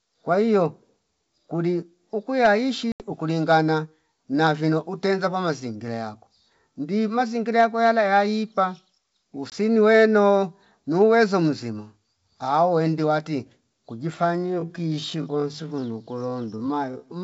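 Around 2.92 to 3.03 s there's packet loss on an ADPCM call: about 80 ms, roughly four packets, drops to hard silence. At 9.50 s a shorter 20 ms gap, about one packet, does the same. Each time the decoder's predictor and step size lose sync with the sender's, so the speech comes back slightly distorted before settling. From 14.24 s to the end there's a time-stretched section. Pace abruptly slows to about 0.6 speed while pitch holds, leaving a dragging feel, likely from software stretching to fit a length. The G.722 wideband coding at 64 kbit/s underneath sounds clean apart from a faint upper-band hiss.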